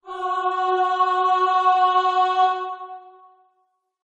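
No dropouts, clipping, glitches or timing errors turn up anywhere in the clip.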